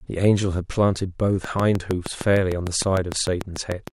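From 1.44 to 3.89 s there's a regular train of clicks, around fifteen at 6.6 per second, popping well above the speech, likely interference or a faulty connection.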